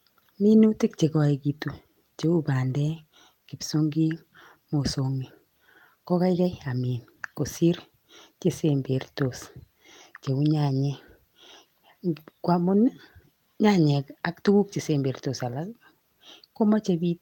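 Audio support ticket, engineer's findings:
No audible faults found in this speech recording.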